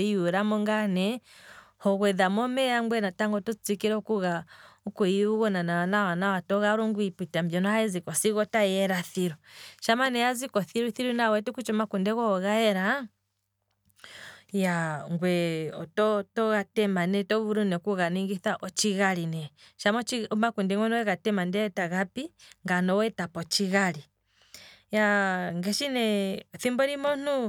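Nothing stood out on listening to this speech recording.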